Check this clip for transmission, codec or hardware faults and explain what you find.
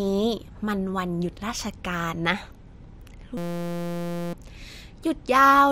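One fault is present: a system hang loop. From 3.37 s to 4.33 s, the sound is replaced by a steady buzz. The system froze while the audio hardware kept replaying the same tiny ring buffer. That buffer holds 5.8 ms of audio, which fits a 256-sample buffer. It repeats 165 times, at a loop rate of 172 Hz, so it is heard as a pitched drone rather than a stutter. About a second of speech is lost.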